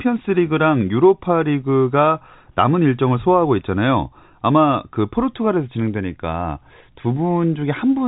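No technical faults occur in this speech clip, which carries the narrow band of G.711 telephone coding with nothing above about 3.9 kHz.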